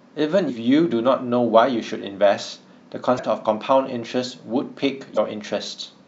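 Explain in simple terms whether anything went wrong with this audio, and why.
Three brief glitches interrupt the speech, at 0.49 s, 3.15 to 3.19 s, and 5.14 to 5.18 s. They come from damaged data in a compressed stream. The decoder misreads broken bits and briefly loses its place.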